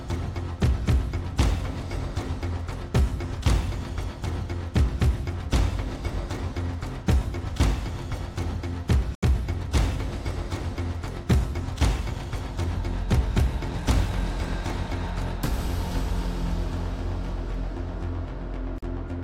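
At 9.15 s the sound drops to silence for 75 ms, then again at 18.78 s for 43 ms, resuming where it left off: a Bluetooth stall, likely the headphones' buffer running dry while delayed packets were resent. Each shows as a sharp-edged blank gap across every frequency.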